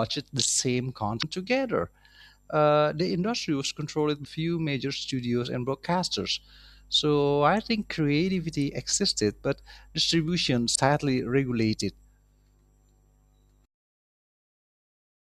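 At 1.19 to 1.24 s, 4.21 to 4.27 s and 10.72 to 10.77 s the speech breaks into a brief chirp, squawk, click or short hole, each about 50 ms long. All three are damaged data in a compressed stream. Bytes in the encoded file were wrong at these points. The decoder misread those frames and lost sync. It then hunted for the next valid frame header before normal decoding resumed.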